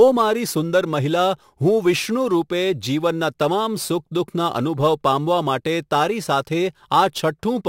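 A crude rate conversion runs through the whole of this speech recording. The audio was moved up to a higher sample rate, consistent with 44.1 kHz to 48 kHz, by simply repeating the nearest existing sample instead of filtering. That regular repetition pattern leaves an error roughly 25 dB below the speech, heard from start to finish as a gritty, inharmonic fizz riding on the louder and brighter sounds.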